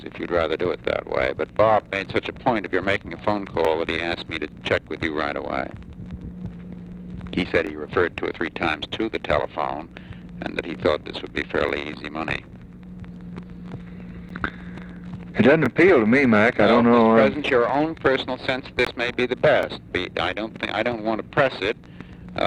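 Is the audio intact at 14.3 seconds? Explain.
No. At 14.29 s the sound drops to silence for about 13 ms and then resumes. This is likely a Bluetooth stall: radio interference delayed packets, the headphones' buffer emptied, and playback held until the retransmitted data arrived. Unlike a click or an edit splice, there is a true gap of silence rather than a sharp transient.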